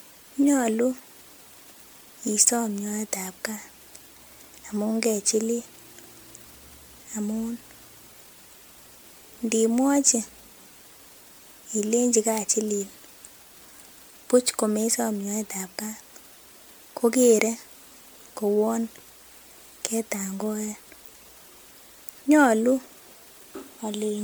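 Throughout the recording the speech has a swirly, hollow quality, with smeared consonant attacks, even though content still reaches about 20.1 kHz. That mix of intact bandwidth and artefacts beyond what the bitrate alone would explain points to generation loss, likely from the audio being passed through an MP3 encoder at a bitrate that fits 128 kbit/s about seven times over. Each pass requantised the sound on a shifted frame grid, so noise and spectral gaps piled up.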